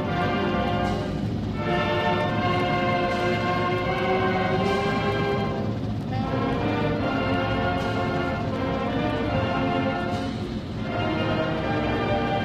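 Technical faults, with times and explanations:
9.10–12.45 s, adaptive stream at a lower bitrate: the player switched to a cheaper encoding partway through, likely because the connection slowed. The change is sudden and leaves no gap. From that point the treble is cut off above 14.9 kHz, with codec artefacts rising. This fits a step down to a spectral-band-replication codec at a far lower bitrate.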